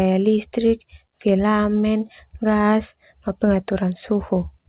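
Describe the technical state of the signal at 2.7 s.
At 2.7 s the speech signal is intact, carrying only the narrowband character of the G.711 mu-law call path, with nothing above 4 kHz.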